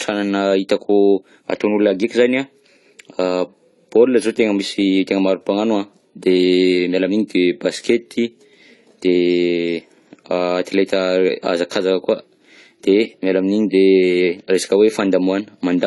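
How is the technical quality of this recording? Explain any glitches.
The recording is clearly degraded by audible codec damage across the whole clip, consistent with AAC compression at a low bitrate.

Throughout the speech, the sound is dull, smeared and warbling, and sibilants come out fizzy. Nothing is present above 11.5 kHz. This is likely AAC-LC compression at a low bitrate, around 32 kbps. The encoder discards upper bands and coarsely quantises the rest. A spectrogram shows a flat ceiling at 11.5 kHz.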